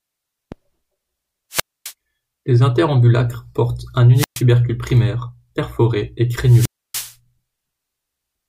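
The analogue FM link from the wireless microphone loses signal strength three times, and each time the receiver's squelch shuts the output, a wireless microphone squelch dropout. From 1.51 to 1.93 s, 4.15 to 4.43 s and 6.44 to 7.15 s, hiss rises as the carrier fades. The speech then falls into a hole of near silence lasting about 260 ms, 123 ms and 291 ms respectively, before it returns.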